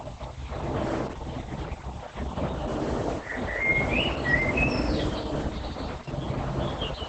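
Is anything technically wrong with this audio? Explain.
Yes. Throughout the speech, the sound is muffled, hoarse and slightly robotic, with nothing above about 8.6 kHz. This is heavy Opus voice compression. The sound points to the codec's SILK linear-prediction coder running in wideband mode at a starved bitrate, which fits roughly 10 kbps. At that rate the band is cut near 8 kHz and the excitation signal driving the vocal model is coded coarsely, which produces the rough, synthetic edge.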